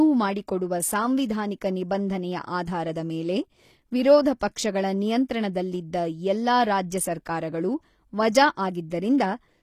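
HE-AAC compression, throughout: the treble sounds gritty and metallic with nothing above 15 kHz, likely from spectral band replication copying lower bands upward, which fits a low bitrate around 24 kbps.

Pre-echo, 9.18 to 9.20 s: a brief hiss smears about 20 ms ahead of a sharp attack, because block-spread quantisation noise fills the quiet moment before it.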